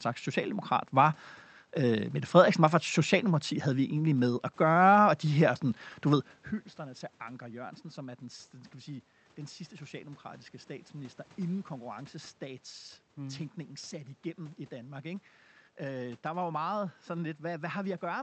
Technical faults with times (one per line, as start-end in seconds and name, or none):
none